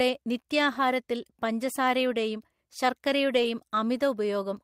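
From 3.31 to 3.45 s, a lost packet rebuilt from error correction: low-bitrate backup copies fill about 80 ms, which fits four lost packets. The speech turns rough and grainy with no gap, and a spectrogram shows a blurrier, noisier patch.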